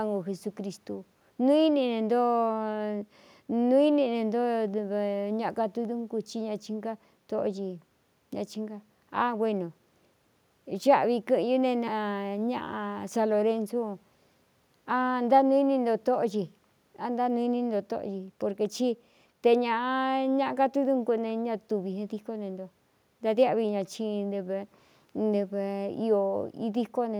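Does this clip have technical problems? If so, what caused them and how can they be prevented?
No, there are no technical faults in this speech clip; the only background is the room's own noise, sitting about 43 dB below the speech, so there is nothing to prevent.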